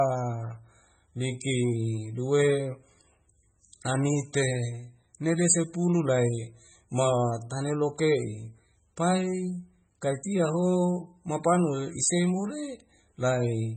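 From start to finish the speech has a hard ceiling at 8.3 kHz and a watery, swirling texture with metallic chirps on s sounds, likely from heavy MP3 compression at a very low bitrate, around 16 kbps. Plain low-pass filtering would dull the treble without that frame-to-frame swirl.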